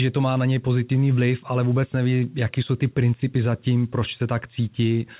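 No technical faults are audible.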